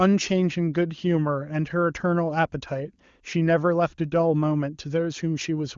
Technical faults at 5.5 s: none

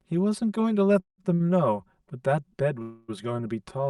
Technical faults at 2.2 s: channel delay (comb filtering)

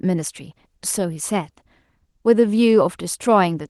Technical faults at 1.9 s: clock drift between sender and receiver; repeated timing corrections

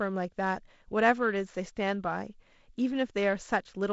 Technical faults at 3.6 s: none

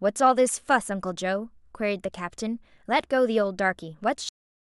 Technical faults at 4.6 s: cut-off end

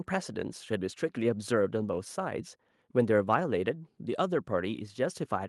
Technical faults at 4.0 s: none

